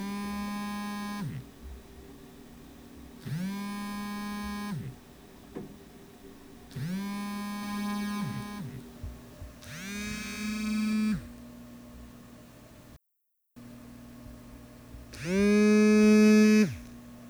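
From 7.63 to 10.93 s a doubled audio track appears: a second, full-band copy of the sound trails the original by roughly 0.4 s at about 5 dB lower, with no decay or room colour, starting and stopping abruptly. The likely cause is a slower second capture path.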